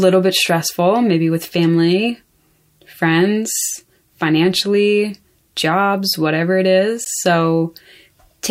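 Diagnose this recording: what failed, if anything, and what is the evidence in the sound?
A brief dropout cuts into the speech at 7.05 s, a hole of about 14 ms with edges smeared by the codec, after which the sound resumes exactly where it stopped. This is a gap at a join of encoded pieces, at the codec stage: two separately encoded segments were spliced without trimming, so the first segment's padded final frame and the second encoder's start-up delay of silence both remain, leaving a short break.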